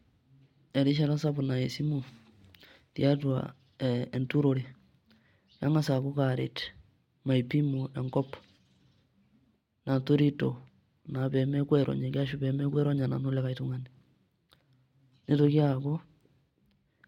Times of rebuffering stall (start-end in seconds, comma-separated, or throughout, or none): none